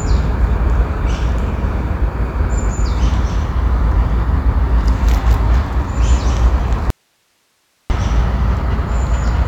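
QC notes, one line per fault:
6.90–7.90 s, audio dropout to a faint residue: sound cuts abruptly to hiss roughly 45 dB down for about 1 s, likely a lost signal feed, showing as a flat-noise gap on the spectrogram.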